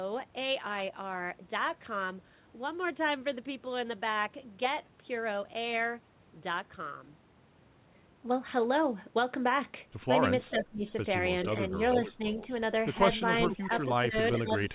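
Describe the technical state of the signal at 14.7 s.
At 14.7 s, an echo leak runs from 13.46 s to the end of the clip. A delayed copy of the speech, trailing by 445 ms and sitting about 15 dB below it, comes through, likely because a loudspeaker's echo canceller on the far end failed to remove what its microphone picked up.

Overlapping that, speech suppressed in double talk runs from 13.56 s to the end. The talker's level dips by around 15 dB at its deepest, likely because the echo canceller, unable to tell the local voice from the loudspeaker echo, turned both down together.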